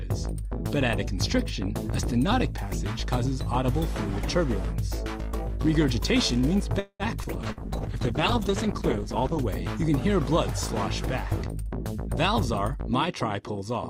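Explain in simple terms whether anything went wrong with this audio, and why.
Several things went wrong on the call's network path, all in the later part of the clip.

From 6.79 to 7.03 s there is a call audio freeze, likely caused by packets being held up in transit so the receiver ran out of audio to play. It stretched the last sound into a fading buzz with a short silence, then picked up where it left off, adding a gap of about 0.2 s.

Twice, short concealed packet loss occurred: at 7.24 to 7.27 s and again at 7.52 to 7.60 s, small chunks arrived too late to use. The receiver patched each hole by extending the surrounding sound, which comes across as a brief smear or wobble.

A call bitrate drop runs from 7.36 to 9.54 s. The connection seemed to worsen, so the sender squeezed the audio into far less data. For about two seconds the sound turns rough, muffled and watery before clearing up.

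From 12.74 s to 13.87 s a jitter buffer speed-up takes place. More audio had piled up than the receiver aims to hold, so it trimmed tiny slices to catch up, about 70 ms in all. The sound plays roughly 7% faster at the same pitch, feeling slightly hurried.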